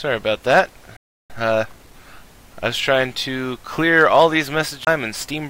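The audio cuts out completely at 0.97 s and stays silent for about 0.33 s, resuming at 1.30 s. That is a playback stall, most likely the player running short of buffered data or its output thread being held up. It differs from a dropout or a CD skip by its length: a third of a second of dead silence, followed by the material carrying on rather than landing somewhere new.

From 1.30 to 1.96 s the sound is rushed along at 1.5 times normal speed while its pitch stays put. This is time-compressed catch-up: the player works off the delay built up during the stall by removing small slices and cross-fading across the joins. Simple speeding up would raise the pitch, and so would tape-style varispeed.

At 4.85 to 4.87 s there is a CD skip: a very brief mute of a few tens of milliseconds, after which the audio continues from a different point. The laser has jumped to another turn of the disc spiral. 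Unlike the earlier stall, the gap is tiny and the continuity breaks, so the sound does not pick up where it left off.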